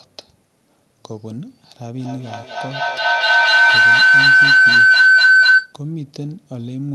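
At 1.98 s a feedback howl begins under the speech. Two devices in the same room form a loop. Microphone feeds loudspeaker, loudspeaker feeds microphone, and each trip adds level. The repeats grow instead of dying away. They narrow onto a tone around 1.5 kHz, the loop repeating roughly every fifth of a second. At its loudest it sits about 16 dB above the speech. It stops at 5.81 s, when the loop breaks. The call codec's cut-off above 12 kHz remains throughout.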